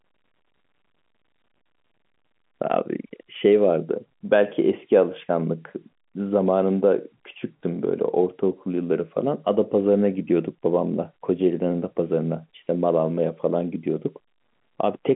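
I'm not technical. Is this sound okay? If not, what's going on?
Yes, it's fine: ordinary telephone-quality speech, nothing wrong.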